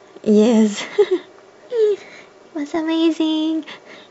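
A speech clip with a brief stutter at about 2.75 s, where an 8.7 ms block plays twice more. These are repeated frames: the decoder replayed the same compressed data, lengthening the audio by 17.4 ms.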